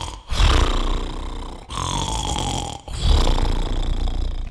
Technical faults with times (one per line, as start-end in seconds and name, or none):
none